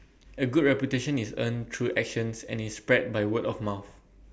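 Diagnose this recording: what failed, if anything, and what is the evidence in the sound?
Nothing in this speech recording points to a failure at any stage of the chain, so there's simply no fault here to diagnose.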